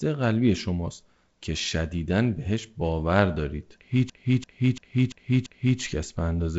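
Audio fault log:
4.10 to 5.80 s, system hang loop: the same 341 ms stretch of speech repeats exactly five times, a stutter at about 2.9 per second. This happens when the computer or driver stalls while the sound hardware keeps replaying its ring buffer, and the loop length fits a 16384-sample buffer. Because the buffer is long, it sounds like a machine-gun stutter rather than a buzz. The wideband telephone coding underneath stops near 7.7 kHz.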